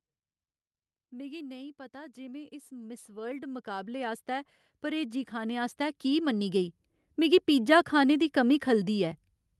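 From 1.91 s to 7.46 s the level climbs steadily by about 20 dB. This is automatic gain rising: the gain control judged the input too quiet and kept turning it up over more than five seconds. Speech and the background noise floor swell together, which sets it apart from a talker moving closer to the microphone, where the voice would grow while the room noise stayed put. The call codec's roughly 12 kHz upper limit applies throughout.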